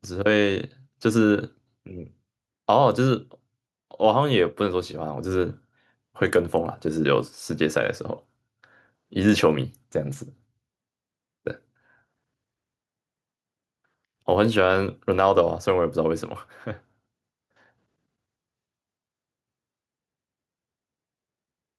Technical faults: none

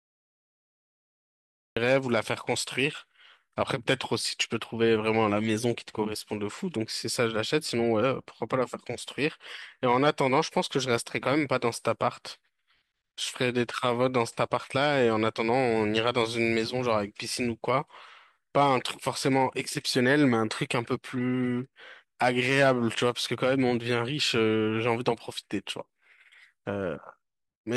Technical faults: cut-off start

